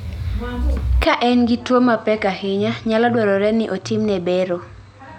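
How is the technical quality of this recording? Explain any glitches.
The recording has one clear fault: from 1.04 s to the end, the sound most likely comes through an input switched to a poorer device. At that moment the speech abruptly turns duller and drops about 5 dB, with no gap at the changeover. The new device passes nothing above 8.5 kHz, so the top of the band disappears, and it adds a faint noise floor of its own, far beneath the speech. On a spectrogram, the energy above 8.5 kHz stops sharply at 1.04 s, and the waveform shrinks from there onward.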